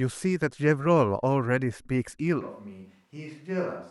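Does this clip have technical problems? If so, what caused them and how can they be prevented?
Yes. From 2.41 s to the end, the speech suddenly turns roomy and hollow. It drops about 10 dB, with thinner bass and more room noise. The likely cause is a switch to a distant microphone after the close one failed. Monitor the close microphone throughout, and record a backup track from it.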